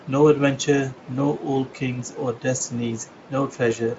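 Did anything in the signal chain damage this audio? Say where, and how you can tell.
No, nothing in the chain damaged this speech.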